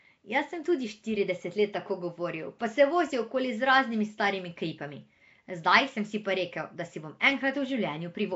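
Throughout, the speech has a rough, hissy halo and an underwater smear, with nothing above 7.7 kHz. Noise fills the starved bands rather than MP3-style swirl, likely Nellymoser compression.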